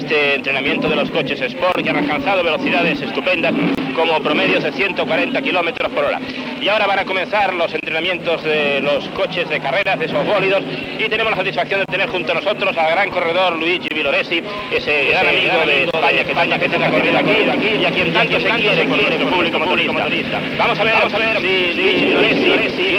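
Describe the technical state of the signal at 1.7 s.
Right at 1.72 s there's a gap at a join of encoded pieces, running to about 1.75 s, so a roughly 25 ms gap dropped into otherwise continuous sound. Two separately encoded chunks were butted together without trimming, so the encoder's start-up delay and the padding on the last frame both stayed in. You hear a brief hole with its edges smeared by the codec, and the sound then picks up where it left off. This join recurs every 2 s.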